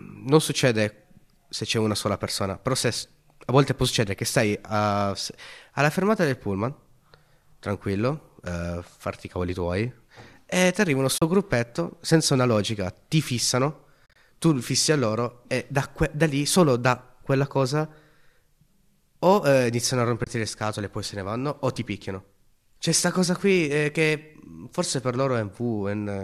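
At 11.18 s, after "e ti arriva uno", there is a soft 40 ms hole before "gruppetto senza una logica". This is AAC frame loss with muting. The decoder zeroed the lost frames. Overlapping windows fade the sound out and back in. At 14.06 s, after "una logica ti fissano", the dropouts scatter over 100 ms, in gaps of up to about 40 ms. At 20.24 s, after "eh iniziano a", a 30 ms hole comes before "le scatole e poi". The 10 ms steps likely come from low-delay AAC frames.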